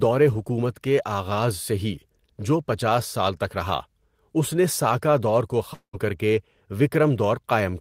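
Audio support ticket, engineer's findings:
Speech, long network dropout, 5.73 to 5.95 s. Last sound smeared into a fading buzz or hiss for about 0.2 s, then roughly 0.1 s of silence before speech resumes with about 0.2 s missing. Likely packet loss with receiver concealment.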